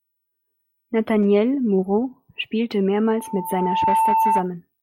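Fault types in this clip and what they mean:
Loudspeaker feedback squeal: from 3.07 to 4.49 s, a single 890 Hz tone swells over most of a second until it sits roughly 5 dB above the speech, because the microphone hears its own loudspeaker and the loop gain passes one at that frequency.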